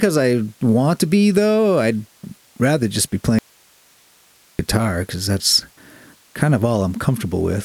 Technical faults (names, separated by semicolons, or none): audio dropout to a faint residue